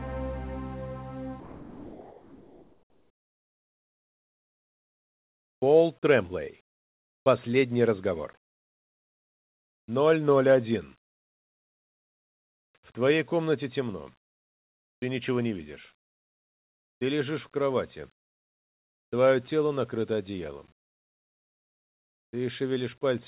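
Comfort noise in place of the background runs from 1.40 to 5.62 s, about 4.2 s. The real background, which sits about 62 dB below the loudest sound, gives way to a steady, featureless hiss about 4 dB quieter, with none of its earlier texture, until the sound resumes. The likely cause is discontinuous transmission: the sender stopped sending during the pause, and the receiver filled the gap with synthetic noise shaped roughly like the background. The band throughout ends at 4 kHz, as the G.711 call path allows.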